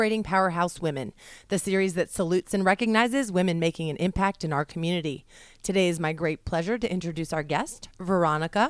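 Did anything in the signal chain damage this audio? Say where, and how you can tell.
No, nothing in this speech recording points to damage at any stage of the chain. Listening across the whole clip, there is no point where the signal gives evidence of a problem at the wiring, converter, processing, transport or playback stage.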